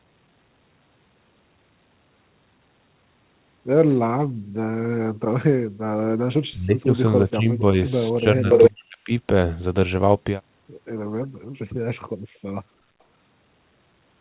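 A speech recording carried over a narrowband call path, with nothing above 4 kHz, which fits a G.711-type telephone codec. Speech suppressed in double talk appears four times, at 6.51–6.96 s, 7.24–7.78 s, 8.2–8.49 s and 8.69–9.11 s. The voice dips and partly cuts out, by about 25 dB in the first, about 10 dB in the next two and about 40 dB in the last. This is likely the echo canceller turning the talker down while the far side spoke at the same time. Between 8.51 and 8.7 s an echo leak brings back a short delayed copy of the voice, about 369 ms behind and close to the speech in level. This is likely residual loudspeaker pickup that the canceller failed to remove. At 11.32–11.56 s the room sound drops out for a fraction of a second, by about 39 dB, then returns. This is background gated by the echo canceller, which clamped the microphone while the loudspeaker was active.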